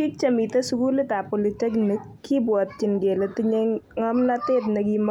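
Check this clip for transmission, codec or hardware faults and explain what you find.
No transmission, codec or hardware faults can be heard.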